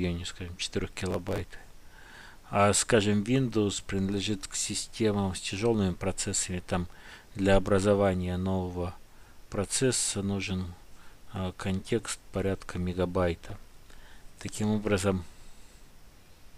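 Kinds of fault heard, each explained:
Processor overload crackle: missed buffer deadlines skip tiny slices of audio in rapid succession, giving gritty tearing bursts around 1.1 s and, longer, 13.5–14.6 s.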